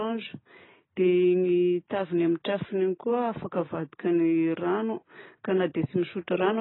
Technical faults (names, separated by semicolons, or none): AAC compression